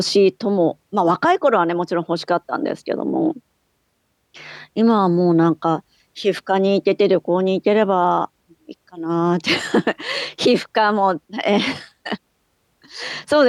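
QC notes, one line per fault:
Nothing to flag here; I listened all the way along and didn't hear a single problem worth noting.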